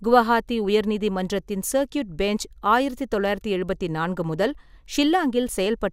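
Nothing goes wrong anywhere in this bit of speech, so there's no technical fault to point out.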